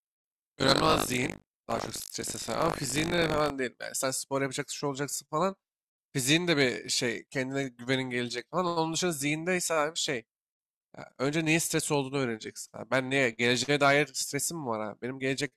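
From 0.0 to 3.51 s, buffer tearing puts a 50 Hz robotic buzz on the speech. About a fifth of each 20 ms buffer replays audio roughly 70 ms old. Unlike mains hum, it disappears in silences.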